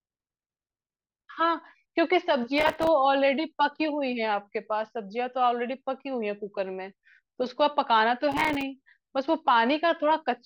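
At 2.58 to 2.88 s and again at 8.32 to 8.62 s there's processor overload crackle. The CPU keeps missing deadlines on buffers a few milliseconds long, leaving dozens of hard-edged silent gaps that tear through the speech.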